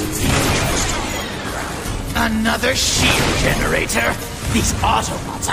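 Nothing in this one stands out as a technical fault, so there's nothing to flag here.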